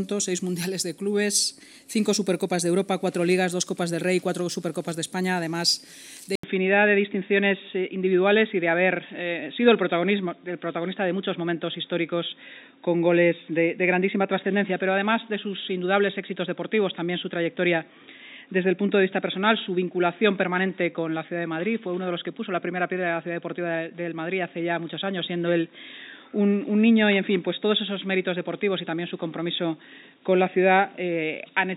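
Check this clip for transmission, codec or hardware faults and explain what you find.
One fault is present. At 6.35 s the input likely switched to a poorer device that passes nothing above 3.8 kHz. After an 80 ms silence, the sound turns dull and boxy to the end, over faint new background noise.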